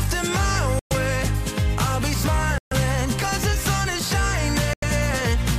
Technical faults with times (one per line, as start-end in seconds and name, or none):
0.79-0.93 Bluetooth stall
2.58-2.73 Bluetooth stall
4.73-4.84 Bluetooth stall